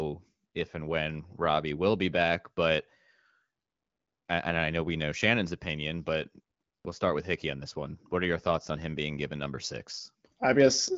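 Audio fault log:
No fault in this clip.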